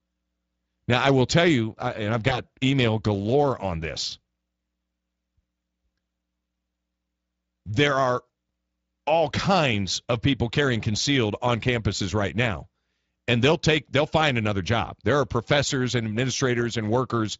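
At 2.29 to 2.40 s, after "tell you and I've", VoIP packet loss concealed by the speech codec stretches the last sound into a brief buzzy tone or coloured noise that fades. The Speex decoder guessed one missing 20 ms frame. A second one-frame dropout hits at 8.27 to 8.29 s.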